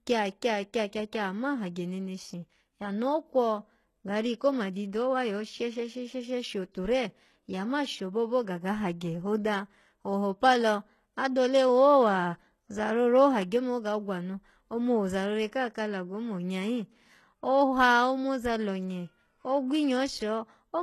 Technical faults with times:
0.00-20.82 HE-AAC compression

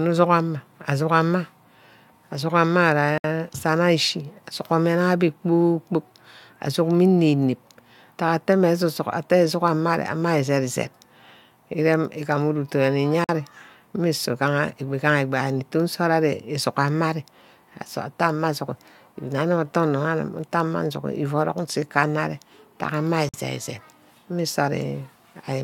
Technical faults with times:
3.18-3.24 gap at a join of encoded pieces
13.24-13.29 gap at a join of encoded pieces
23.29-23.34 gap at a join of encoded pieces

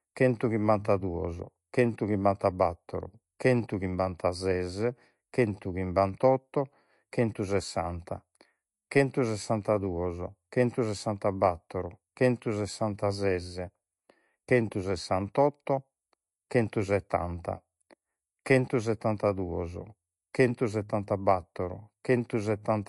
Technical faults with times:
0.00-22.88 MP3 compression

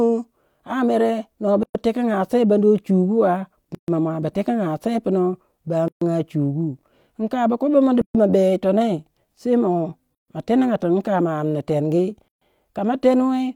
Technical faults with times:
1.63-1.75 gap at a join of encoded pieces
3.75-3.88 gap at a join of encoded pieces
5.88-6.01 gap at a join of encoded pieces
8.01-8.15 gap at a join of encoded pieces
10.15-10.28 gap at a join of encoded pieces
12.28-12.41 gap at a join of encoded pieces

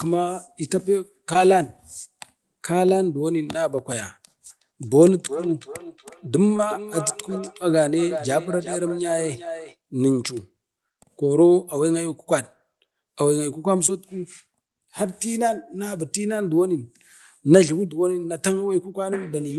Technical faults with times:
1.33-1.37 short concealed packet loss
4.50-9.78 feedback echo between two devices
6.57-6.61 short concealed packet loss
13.87-13.90 short concealed packet loss

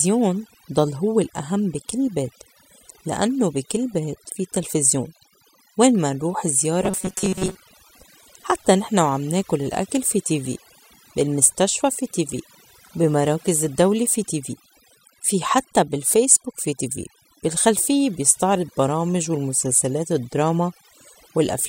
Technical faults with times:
0.00-21.69 overdone noise removal
6.84-7.56 robotic sound from repeated short buffers

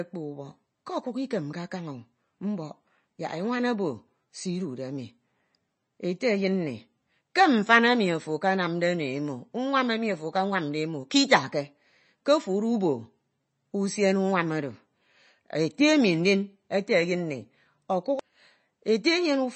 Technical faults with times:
0.00-19.55 MP3 compression

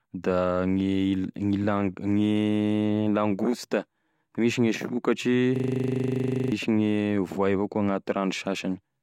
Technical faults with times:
5.56-6.52 system hang loop

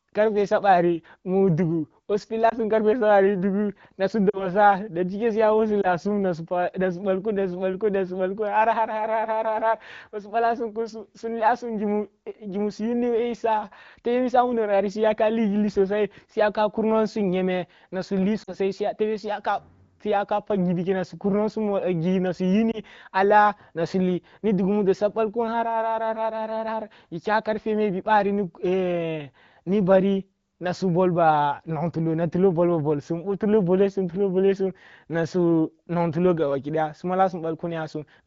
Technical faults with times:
2.49-2.56 lost AMR speech frames
4.30-4.49 lost AMR speech frames
5.81-5.87 lost AMR speech frames
18.43-18.55 lost AMR speech frames
22.71-22.80 lost AMR speech frames

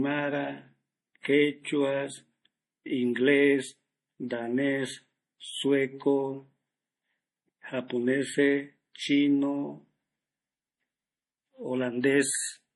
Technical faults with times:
0.00-12.75 MP3 compression

